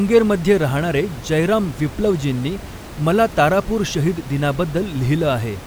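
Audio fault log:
Nothing's wrong in this speech clip; the only extra sound is the room's own background noise sitting about 16 dB below the speech, which belongs to the recording rather than the system.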